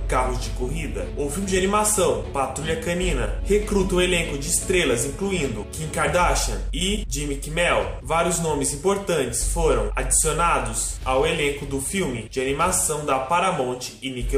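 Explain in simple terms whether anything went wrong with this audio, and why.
Nothing went wrong with this audio, so there is nothing here to explain.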